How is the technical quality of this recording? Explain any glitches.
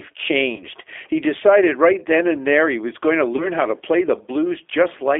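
Technical quality is limited: the speech is band-limited and slightly rough throughout, with two short dropouts where the sound briefly turns buzzy or noisy and weak.

Throughout, the speech sounds thin, confined to roughly 300 Hz to 3.5 kHz, with a plainly audible gritty, synthetic edge. This is the G.729 codec, which fits an 8 kbit/s telephone-grade stream. Rather than transmitting the waveform, it rebuilds each 10 ms frame from a vocal tract filter, a pitch predictor and a few pulses. That sparse reconstruction produces the roughness, and the narrow line band cuts off the highs and lows.

From 0.56 to 0.65 s, the speech smears into a short, buzzy or noisy, fading sound. A second such moment runs from 3.36 to 3.49 s, between "he was going to" and "how to play the". Both are VoIP packet loss concealed by the speech codec. About 30 ms of audio went missing each time, which fits a single lost packet. 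The decoder filled the gap by repeating its last pitch and filter settings at decreasing gain. Because each frame depends on the one before, the sound stays weak or distorted for tens of milliseconds or more after the 30 ms gap.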